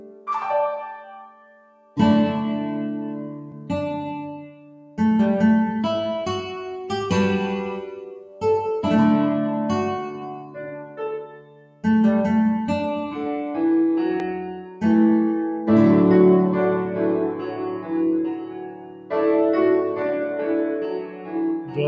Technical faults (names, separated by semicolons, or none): noise suppressor applied to music or sounds; sound cut by the noise suppressor